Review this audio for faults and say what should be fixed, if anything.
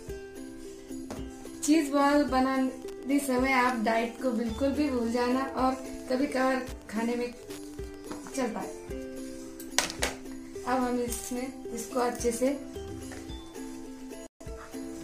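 There's Wi-Fi interference from 2.76 s to 8.12 s: a steady tick roughly ten times a second, sitting well below the main sound, around 30 dB down. A nearby Wi-Fi radio's beacon, firing every 102.4 ms, is getting picked up and rectified somewhere in the audio circuit, so each beacon turns into a click. To prevent it, keep phones and routers away from the mic, preamp and cables, and use shielded, balanced leads.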